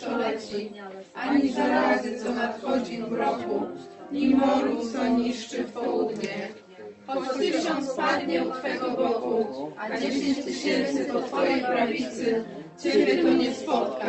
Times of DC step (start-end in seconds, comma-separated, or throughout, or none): 0.50-14.08